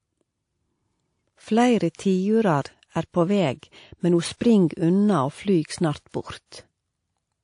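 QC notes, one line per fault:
throughout, transcoding between lossy codecs: the speech sounds dull above 10.5 kHz, with smeared, swirly artefacts layered on one another. The likely cause is a low-rate MP3-style encode re-encoded through a second codec, which spends bits re-coding the first codec's damage and adds its own.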